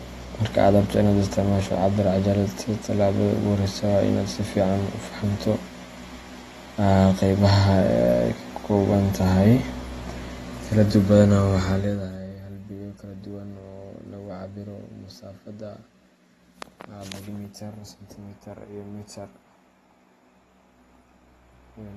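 It's a speech recording with audible codec damage all the way through. Nothing comes through above about 12.4 kHz, so it's dull and a bit smeared, with fizzy sibilants. That points to AAC compression, likely AAC-LC at a low rate around 32 kbps.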